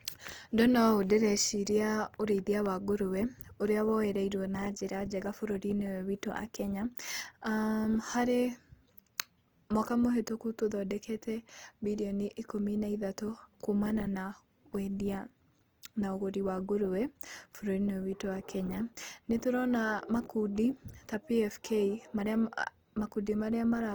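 Opus compression runs throughout this speech recording: the likely cause is a low-rate Opus encode in music mode, around 24 kbps, where bands are refilled with folded or noise content, leaving the sound grainy and rough while still reaching about 20.2 kHz.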